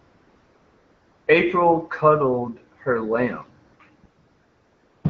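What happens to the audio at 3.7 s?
From 3.65 to 3.79 s, AMR comfort noise replaces the real background: transmission paused for 140 ms and the receiver substituted smooth, steady synthetic noise.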